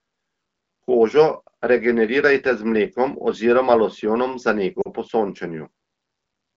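At 4.82 s, just after "mlekom oziroma losjonom za", the speech stalls for about 40 ms, which fits two lost AMR speech frames of 20 ms each. Corrupted frames failed their checksum, so the decoder carried forward the last good pitch and vocal tract settings at falling gain. The result is a smeared hold that sags toward near silence rather than a clean silent gap or click, and the wideband speech around it resumes briefly thin.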